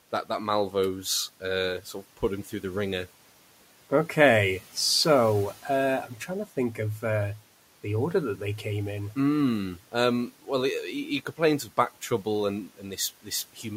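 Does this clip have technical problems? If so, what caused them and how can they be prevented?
Yes. Between 12.67 and 12.98 s, after "complains of back trouble", there is speech cut by the noise suppressor. It mistook soft sounds for noise and lowered about a tenth of a second by about 11 dB. A spectrogram shows faded energy, a waveform a sudden dip. Gentler suppression prevents it.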